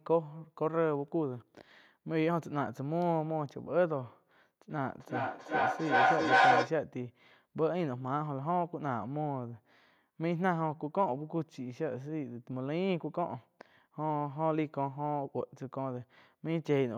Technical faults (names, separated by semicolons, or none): feedback howl